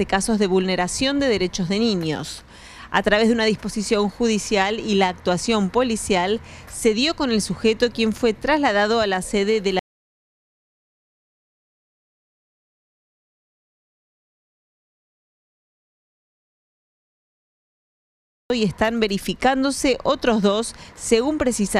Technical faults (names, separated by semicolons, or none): audio dropout to silence